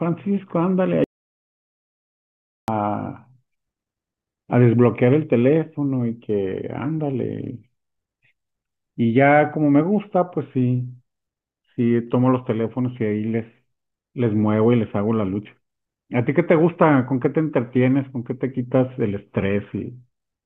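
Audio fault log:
1.04 to 2.68 s, audio dropout to silence: the speech stops mid-flow and the signal falls to silence for about 1.64 s, with no room tone or noise floor underneath, then resumes just as abruptly. That dead-flat gap is the sign of a recording chain that kept writing samples after its input vanished, likely from a momentary disconnection, failed link or accidental mute, so whatever was spoken in that stretch is simply missing.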